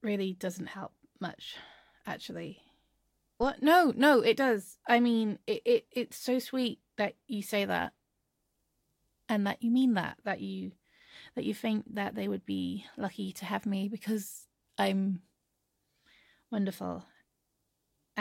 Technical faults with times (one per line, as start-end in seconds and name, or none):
3.43-3.48 phantom power thump